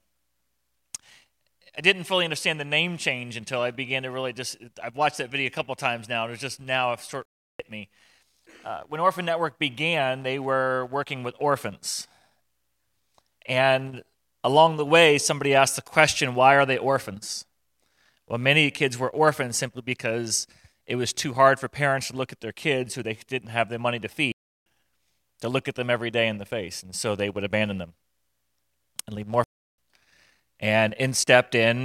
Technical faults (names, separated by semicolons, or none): block of digital silence